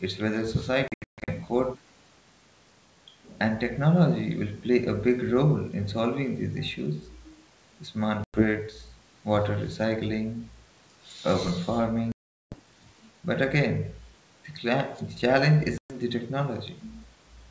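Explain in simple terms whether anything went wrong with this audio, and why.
Four stretches of packet loss on an ADPCM call cut holes in the speech, at 0.88 to 1.29 s, 8.24 to 8.43 s, 12.12 to 12.56 s and 15.78 to 15.97 s. Each gap goes abruptly silent. Because the decoder loses track of the sender, speech returns slightly distorted for a moment before settling.

A sudden gain jump occurs between 9.44 and 9.61 s, where the speech and the background noise drop sharply in level together with no fade. The likely cause is a volume setting being applied instantly rather than ramped.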